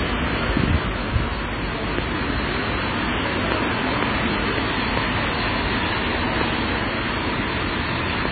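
Throughout the clip, nothing is present above 4.5 kHz, and the remaining audio sounds watery and swirly, with weak components flickering in and out and transients smeared. This is likely heavy MP3 compression at a very low bitrate, around 15 kbps.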